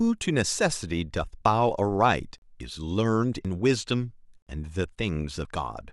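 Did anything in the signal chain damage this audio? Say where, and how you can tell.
Yes. Audio missing between chunks at 1.45, 3.45 and 5.45 s: speech jumps forward by roughly 40 ms every 2 s, likely a recorder buffer dropping samples at chunk changeovers.

Gap between stream segments at 2.38–2.42 s and 4.42–4.47 s: hard-edged silences of 38 and 47 ms every 2 s, where playback filled timestamp gaps between segments.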